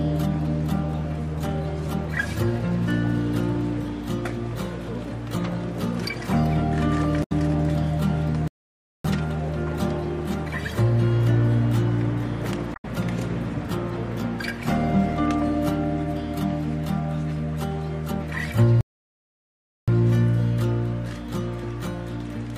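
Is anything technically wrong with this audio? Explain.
Yes. There are two kinds of technical fault.

From 7.22 to 7.32 s and again from 12.74 to 12.85 s, the sound is briefly disrupted for about a tenth of a second each time. This is damaged data in a compressed stream: corrupted bytes make the decoder misread or reject frames, lose sync, and hunt for the next valid frame header.

From 8.48 to 9.05 s the audio cuts to silence for about 0.57 s, and from 18.81 to 19.88 s it falls silent for about 1.07 s. Both are likely playback stalls, where the player ran short of data or its thread was blocked, halting output until it recovered.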